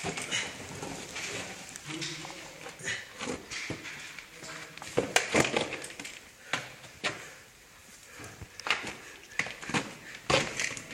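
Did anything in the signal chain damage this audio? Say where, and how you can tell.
No, nothing along the chain seems to have harmed these everyday sounds, and there's nothing to point to at any stage.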